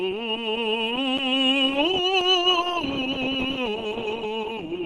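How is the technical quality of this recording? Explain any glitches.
The recording has plainly audible compression damage from start to finish, and nothing is heard above 12 kHz. Tones come across rough, grainy and hoarse, with a muffled, narrowed top end instead of an open sound. The likely cause is Opus compression at a very low rate, consistent with about 16 kbps, where the encoder appears to switch into its hybrid speech-oriented mode. The upper bands get only a coarse approximation, and the sound is limited to super-wideband.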